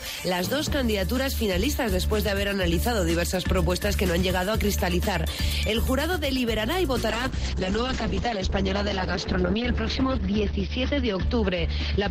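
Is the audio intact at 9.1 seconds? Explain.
No. A call bitrate drop runs from 7.1 s to the end at 12.1 s. The encoder's rate falls from 96 to 8 kbps, so the sound is coded coarsely and cut off above 6 kHz, turning muffled and watery. A simple low-pass filter would only dull the sound, without the rough, smeared texture.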